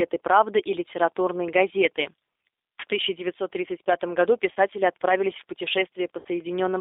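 G.729 codec, throughout: the speech is squeezed into a telephone band of roughly 300 Hz to 3.7 kHz and rebuilt from a vocal tract model, a pitch predictor and a few pulses per frame, which fits an 8 kbit/s coder. The result is plainly rough and slightly synthetic.

VoIP packet loss concealed by the speech codec, at 4.52–4.57 s and 6.19–6.29 s: about 40 ms and then 60 ms of audio went missing. The decoder extended its last pitch and filter at falling gain, so each gap becomes a brief, fading smear, and the voice stays weakened for a moment afterwards.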